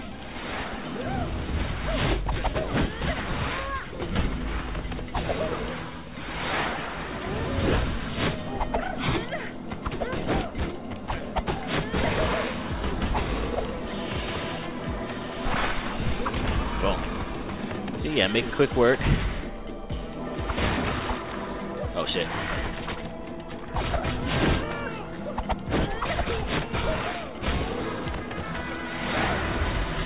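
Nothing in the audio stood out as a technical problem on listening.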